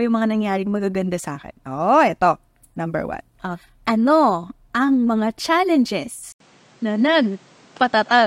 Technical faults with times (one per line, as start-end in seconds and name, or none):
6.32-8.26 input switched to a poorer device